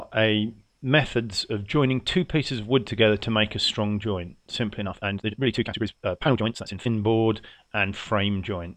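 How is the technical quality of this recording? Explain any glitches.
The recording has one glitch, a time-stretched section from 4.77 to 6.91 s. Here the sound suddenly rushes ahead at roughly twice its normal pace, yet its pitch stays unchanged. The likely cause is software squeezing that stretch to 1.99 times speed, dropping short slices to hold the pitch steady.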